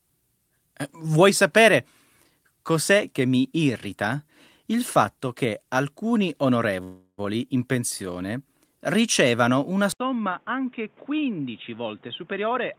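At 6.83 s, after "il fatto che alcuni", the speech stalls into a fading buzz or hiss, briefly silent, until 7.20 s. This is a call audio freeze, likely from delayed packets, and it adds about 0.35 s without losing speech.

At 9.92 s, after "ricevano una", the input likely switched to a poorer device. There is a brief 80 ms silence. Then speech turns dull and about 10 dB quieter, with nothing above 3.8 kHz and a noise floor roughly 30 dB down.

From 11.82 to 12.56 s a jitter buffer speed-up plays speech at 117% speed, same pitch. Roughly 150 ms of audio is trimmed away, so it sounds hurried.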